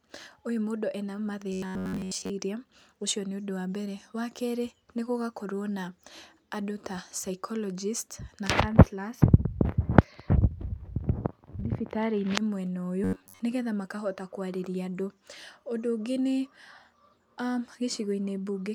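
From 1.53 to 2.30 s the speech goes robotic, a stiff metallic buzz pitched at 93.8 Hz that loosely tracks the words. It's likely from repeated short buffers: audio arrived late, and roughly 70% of the stretch was filled by replaying a chunk of about 10.7 ms, which is what locks that buzz in. The same thing hits again from 13.04 to 13.40 s, just before "nĩgetha makahota kwarĩria".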